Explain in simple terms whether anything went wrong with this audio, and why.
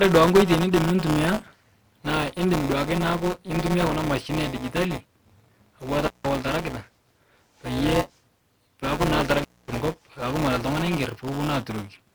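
Yes, two things went wrong with this speech.

The first is buffer tearing, and it runs through the whole clip. The program feeding audio to the hardware has slipped out of step with it. So each small chunk of sound includes a slice left over from the previous lap, about ten milliseconds old. The joins are abrupt. You hear a steady robotic buzz at 188 Hz, which fits a 256-sample buffer. It only appears when someone is talking.

The second is intermittent contact, a loose cable or plug that briefly opens. It happens twice. From 6.07 to 6.27 s the sound drops out for about 151 ms. From 9.38 to 9.74 s it drops out for about 241 ms. Each gap has a crackle at its edges, and during the gap faint hiss remains.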